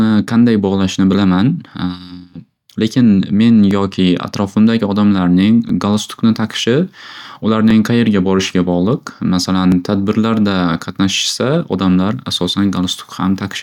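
From 1.71 s to 11.73 s the speech carries periodic USB or driver dropouts: about seven short ticks spaced a steady 2.0 s apart. Each time, a background task stalls the USB bus or audio driver and roughly a millisecond of audio is skipped, so the waveform jumps and clicks. Random clicks from a bad cable or interference would arrive at irregular intervals; here the fixed 2-second spacing points to a scheduled interruption in the driver path.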